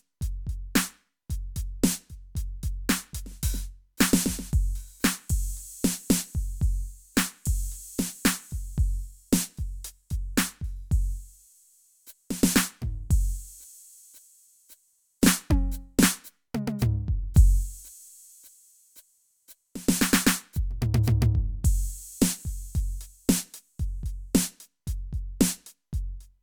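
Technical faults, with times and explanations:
No technical faults detected.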